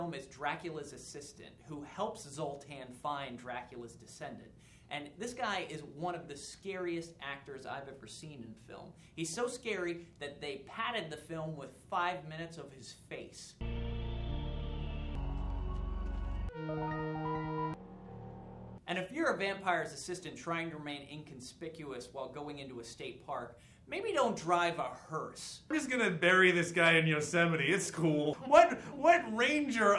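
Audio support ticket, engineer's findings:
No fault found on listening; no dropouts, clipping, distortion or timing issues detected, nothing to escalate.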